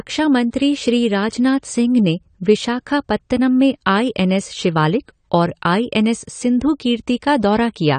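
AAC compression runs through the whole clip: the speech has nothing above 9 kHz and sounds dull and smeared, with a fizzy, warbling edge on sibilants. The likely cause is low-bitrate AAC-LC coding, whose coarse quantisation empties upper bands, damage that fits roughly 32 kbps.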